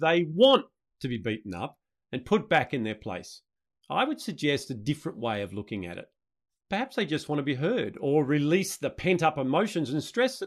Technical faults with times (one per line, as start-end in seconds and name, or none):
0.00-10.47 block size mismatch (truncated)